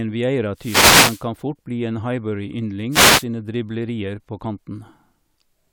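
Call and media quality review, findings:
Wireless microphone noise hit, 0.53–1.30 s and 2.89–3.26 s (second ends before "driblerier på"). Static swish rising over speech as the analogue FM radio link fades from multipath cancellation. Hiss grows gradually, unlike a packet-loss gap or digital dropout, which cut to silence.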